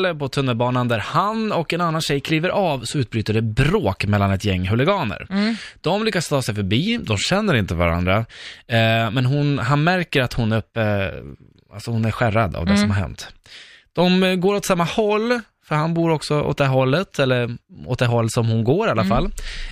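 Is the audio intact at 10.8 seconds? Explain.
No, a drift correction step runs from 10.60 to 11.23 s. The speech speeds up by 5.6% and rises about 94 cents, just under a semitone, then snaps back, likely a clock-matching resampler briefly changing its rate to rebalance its buffer.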